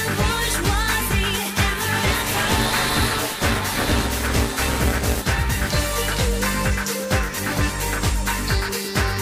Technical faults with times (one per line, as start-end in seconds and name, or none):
2.07-5.22 buffer tearing